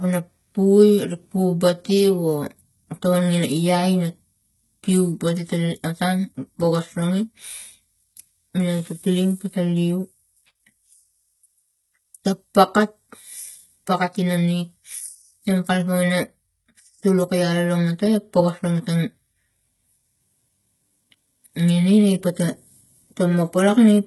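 HE-AAC compression runs throughout the speech: treble above the core band is likely rebuilt by spectral band replication, with nothing above 11.8 kHz, and heavy damage that fits a bitrate around 16 kbps. S sounds come out gritty and lispy, with a metallic sheen.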